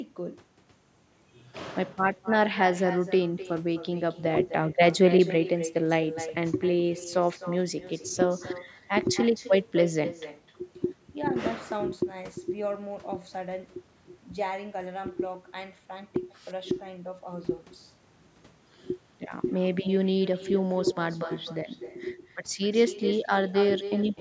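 From start to finish the far end is playing the call through a loudspeaker, and its microphone feeds that sound straight back with no echo canceller to remove it. The result is echo with no canceller: every phrase of the speech returns roughly a third of a second later, about 13 dB quieter, as a thin copy trailing the talker. Because it never lets up, the speech sounds doubled and smeared throughout, over a band that stops at 8 kHz as the call's microphone processing intends.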